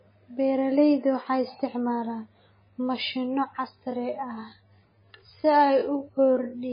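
From the start, the speech is dull and watery, with nothing above 5 kHz. Heavy MP3 compression is the likely cause, pointing to a very low bitrate near 17 kbps. From 3.73 s to the end, the pace slows abruptly to about 0.61 times speed while pitch holds. Speech drags, likely from a time-stretched section.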